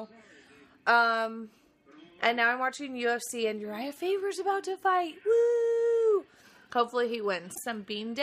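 From 7.51 to 7.58 s a glitch marks damaged data in the compressed stream: the decoder misreads corrupted frames and loses sync.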